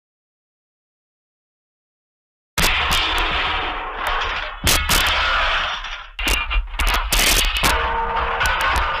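The loud passages break up with integer overflow: whenever the signal pushes past full scale, the samples wrap to the opposite sign instead of clipping, so you get harsh, violent cracks rather than flattened peaks. It happens at 2.58–3.18 s (about 4 dB over), a single crack at 4.07 s (right at the limit), 4.67–5.09 s (about 6 dB), 6.28–6.34 s (about 4 dB), 6.80–7.71 s (about 6 dB), and 8.46–8.78 s (about 1 dB).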